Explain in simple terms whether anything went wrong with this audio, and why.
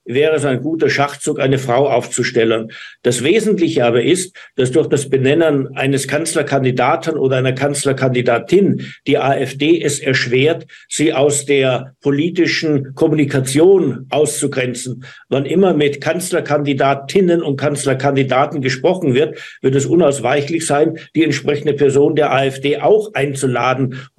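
Nothing went wrong here.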